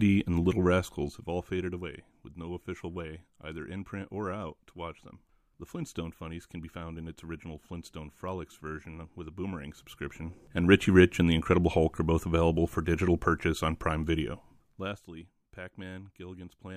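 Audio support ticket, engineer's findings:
Zipper noise at 0.49–1.83 s (roughly 15 dB fade-down), 9.50–10.87 s (roughly 15 dB rise) and 14.29–15.06 s (roughly 20 dB drop). Gain stage stepping unsmoothed, about 20 then 50 steps a second. Regular ticking only while level moves, unlike random crackle.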